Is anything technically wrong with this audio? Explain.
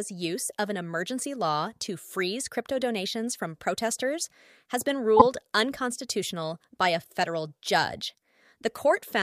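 Yes. At 5.17 to 5.22 s the speech has a corrupt frame decoded. Damaged bits across several frames put energy at the wrong frequencies, heard as a chirp, squeak, blip or burst of noise.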